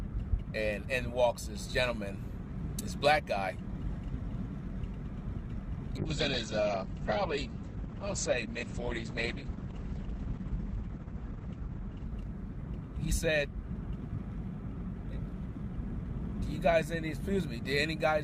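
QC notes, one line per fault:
5.98–13.35 s, call bitrate drop: the sound turns rough, watery and muffled, worst for about 5.6 s, because the encoder was starved of bits. It codes coarsely, which fits a fall from around 48 to 9 kbps, and top end narrows from 20 kHz to 8 kHz.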